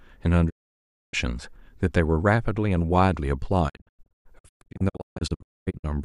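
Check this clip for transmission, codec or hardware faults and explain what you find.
Two faults are present, both digital broadcast dropouts. At 0.49 to 1.15 s the speech fades out over 20 ms into silence; from 3.68 to 5.85 s it breaks into scattered short holes, the longest 240 ms. The receiver muted on lost or corrupted frames, so that speech is gone.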